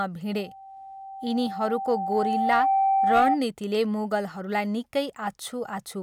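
From 0.38 s to 3.39 s, loudspeaker feedback squeal rings at 779 Hz. The microphone is hearing its own loudspeaker, and at that frequency the loop gain passes one. The tone swells over roughly two seconds to sit about 5 dB above the speech. A spectrogram shows it as a single bright horizontal line.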